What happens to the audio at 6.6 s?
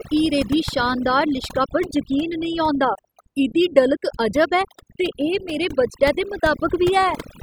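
At 6.6 s the speech is under overdone noise removal, which runs throughout: bands near the noise estimate are gated away, leaving a lowered background broken into twinkling specks.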